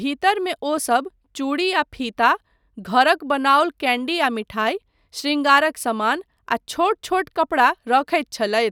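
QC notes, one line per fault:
No faults found.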